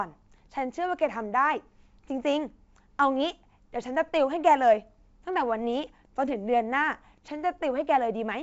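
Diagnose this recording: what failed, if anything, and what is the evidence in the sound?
Nothing has failed: the speech arrives over a normally working G.722 wideband telephone coding path at 64 kbit/s, with bandwidth extending to roughly 7 kHz and any coding trace faint at most.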